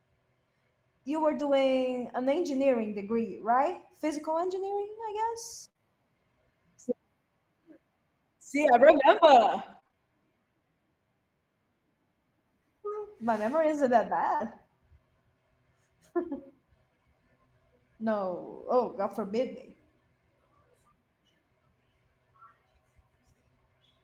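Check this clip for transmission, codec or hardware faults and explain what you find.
Network packet loss is the main problem in this speech, concealed in four different ways.

Lost packet rebuilt from error correction occurs at 1.23–1.41 s, at 3.05–3.11 s just after "an engineering", at 4.39–4.57 s, and at 14.40–14.54 s after "memory isn't that". The receiver replaced about 100, 40, 100 and 80 ms with the low-bitrate backup copy carried in the following packets. There is no gap, but those stretches sound rougher and noisier.

A burst of packet loss runs from 5.69 to 5.82 s. About 60 ms of audio never arrived in time. The receiver extended the last sound for roughly 52 ms while fading it, producing a held buzz or dying hiss. Playback then jumps ahead, so that part of the speech is missing.

Short concealed packet loss appears at 5.77–5.81 s, inside the burst, and at 14.36–14.42 s right after "memory isn't that", overlapping the rebuilt stretch there. 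About 20 and 40 ms were lost. Each hole was filled by continuing the previous sound, which is heard as a brief smear or wobble.

Scattered short gaps cover 8.92–9.96 s. Roughly four separate holes, the longest about 20 ms, were patched by continuing the last sound, around 7 percent of that second. The speech is mostly clear between them but has small ticks and hiccups.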